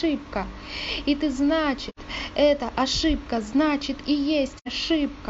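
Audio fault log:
1.89 to 1.99 s and 4.57 to 4.68 s: AAC frame loss with muting. At each point the decoder lost a short run of compressed data, about 85 ms, which fits two AAC frames, and filled the missing spectrum with zeros. The speech drops into a brief silent hole roughly a tenth of a second long. Because the overlapping transform windows taper the surviving frames on either side, the sound fades out and back in rather than cutting off abruptly, leaving soft edges.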